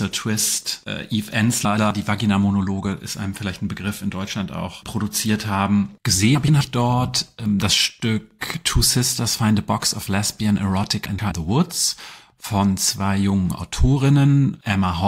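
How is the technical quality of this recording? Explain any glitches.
The recording has three short glitches, all the same kind: frames out of order, at 1.65 to 1.91 s, 6.35 to 6.61 s and 11.06 to 11.32 s. In each one, two neighbouring 128 ms blocks got swapped, which points to runs of four frames, so the quarter-second plays back-to-front in halves. You hear a garbled flutter, and the timing stays intact.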